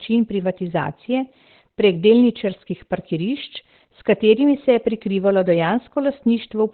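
Throughout the speech, nothing is heard above about 4.2 kHz. The sound is muffled, hoarse and rough, and the damage is heavy. The likely cause is Opus compression in its narrowband speech (SILK) mode. That points to a very low bitrate, around 12 kbps.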